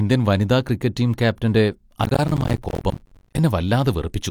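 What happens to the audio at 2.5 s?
A burst of gritty crackle tears through the speech from 2.04 to 3.38 s. This is processor overload crackle: the processor repeatedly missed its deadlines, dropping dozens of short buffers of around 10 ms each and leaving hard-edged gaps of silence in their place.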